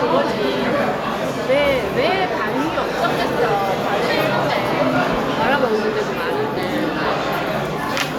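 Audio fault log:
No faults heard.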